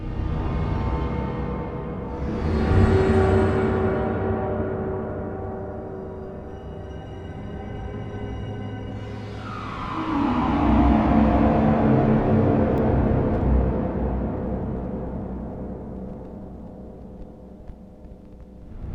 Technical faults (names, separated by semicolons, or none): block of digital silence